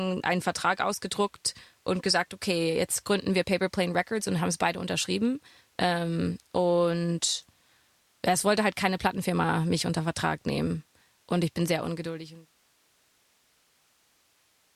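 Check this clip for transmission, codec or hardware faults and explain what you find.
No transmission, codec or hardware faults can be heard in this speech clip. Near the end the level eases down in a smooth fade-out, beginning at roughly 11.5 s and finishing at 12.57 s, with no click or hard edge.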